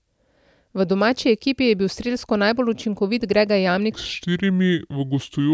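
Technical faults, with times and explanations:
3.92–5.53 s, wrong sample rate: the speech drops to about 0.73 times normal speed and about 5.5 semitones lower, which fits 22 kHz audio played at 16 kHz. On a spectrogram, harmonics and formants shift downward and stretch in time; the waveform looks widened.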